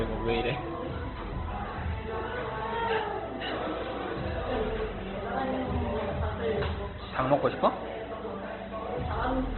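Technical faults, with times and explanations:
Throughout, Opus compression: likely a low-bitrate Opus encode in CELT mode, narrowband, leaving nothing above 4.2 kHz, so the sound turns muffled, rough and grainy.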